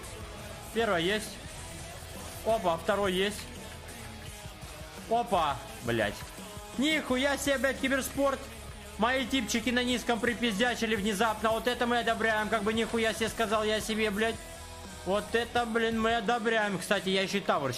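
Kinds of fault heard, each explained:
No kinds of fault are heard in this clip.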